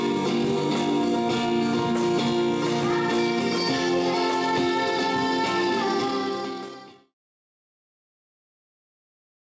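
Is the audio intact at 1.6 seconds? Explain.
Yes, at 1.6 seconds the audio is intact, with no fault audible at that moment.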